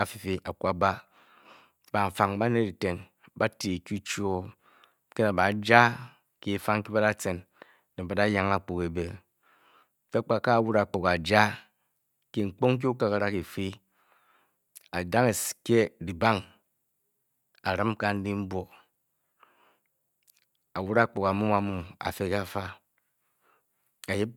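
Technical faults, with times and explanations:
No technical faults heard anywhere in this speech recording.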